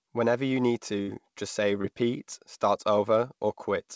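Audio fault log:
1.02–1.10 s, burst of packet loss: about 60 ms never arrived. The last sound was stretched and faded out, and speech resumed past the gap, unlike a brief smear.
1.82–1.86 s, short concealed packet loss: a 20 ms hole was patched from the preceding sound and blended back, leaving only a fleeting smear rather than a held, fading buzz.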